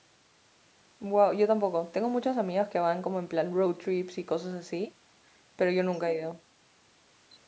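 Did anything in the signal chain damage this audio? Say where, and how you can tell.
No, nothing damaged this audio.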